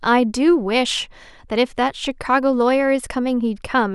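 No technical faults are audible anywhere in the speech recording.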